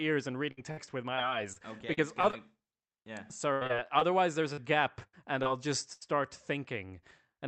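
Repeated packet loss (robotic sound) hits the speech from 0.51 to 2.35 s and again from 3.53 to 6.03 s. In each stretch, seven separate dropouts occur, the longest lasting 62 ms in the first and 80 ms in the second. Each hole is bridged by stretching out the preceding sound, so about 13% of each span is synthetic fill. The speech turns choppy, with fragments lost, over the Opus call path's limited bandwidth.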